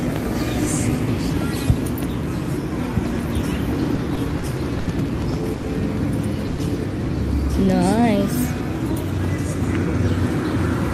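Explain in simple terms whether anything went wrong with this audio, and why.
From 3.95 to 4.88 s there are repeated stalls (stutter). The sound catches four times, for about 150 ms in all, because late network packets kept leaving the playback buffer empty.

At 5.54 s a short stall from a late packet holds one sound for about 90 ms. Then the audio carries on, with nothing missing.

At 6.47 s comes a call audio freeze. The sound hangs as a brief fading buzz or hiss for about 110 ms, likely from packets held up on the way.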